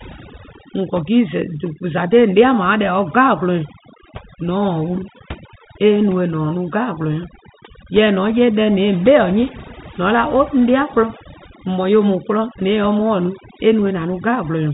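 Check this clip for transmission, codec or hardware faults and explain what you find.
One fault runs through the whole recording: overdone noise removal, heard over speech carried in a telephone band that stops near 3.8 kHz, which fits G.711 mu-law coding at 64 kbps.

The noise reduction is pushed too hard. Any frequency band whose level falls near its estimate of the background gets pulled far down or switched off. Quieter parts of the speech fall below that line too, and the gaps between phrases go almost silent apart from twinkling specks. A spectrogram shows this as a dark floor scattered with isolated bright dots and ragged, hollowed-out speech harmonics. On the waveform the pauses flatten almost to zero.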